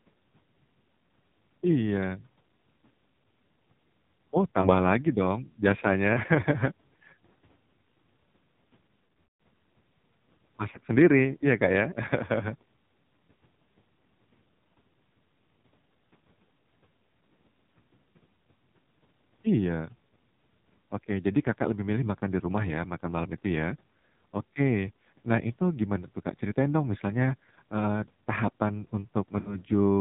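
It's a speech recording squeezed through the AMR narrowband mobile codec, and a heavy-handed version at that. Everything above 4 kHz is gone, and the voice has that buzzy, synthetic edge you get when the vocal-tract model is fed very few bits, which fits one of the low modes, around 5.9 kbps. On top of that there are lost AMR speech frames, where the decoder papers over missing frames by repeating the last pitch and filter settings while fading the gain. There are short blips at 4.62 to 4.69 s, just before "lagi dong biasanya", and at 10.72 to 10.78 s, just before "sendiri ya", each sounding like roughly a single 20 ms frame dropping out as a quick dip or warble. A slightly longer one at 29.40 to 29.60 s, right after "dong misalnya eee tahapan", fits about 60 ms of loss. The worst is 9.06 to 9.33 s, a scattered cluster where the sound smears, sags toward silence over its longest stretch of about 180 ms, and comes back rough.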